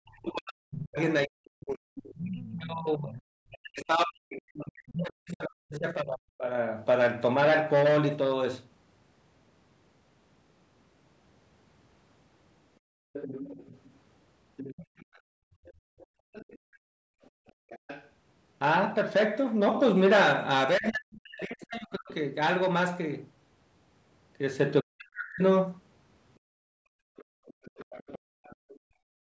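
From 0.0 to 6.45 s the speech dips, falling by roughly 40 dB at its deepest. This is speech suppressed in double talk, likely because the echo canceller could not separate the talker from loudspeaker echo during simultaneous talk, and turned both down.

Between 2.07 and 5.02 s the other side's voice leaks through, about 10 dB below the speech. The likely cause is that the canceller failed to remove all of the loudspeaker sound from the microphone.

From 12.8 to 17.69 s the room background dips, by about 34 dB. This is background gated by the echo canceller. It clamped the microphone hard while the loudspeaker played.

Leakage returns from 13.13 to 18.1 s, about 15 dB below the speech, and likely has the same cause.

From 20.78 to 25.42 s the speech is again suppressed in double talk, with dips of roughly 40 dB. The canceller likely pulled everything down during overlap.

From 26.39 s to the end the background is gated again by about 34 dB. 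Faint leakage sits within it from 27.16 to 28.79 s, about 25 dB below the speech, likely from echo the canceller left behind.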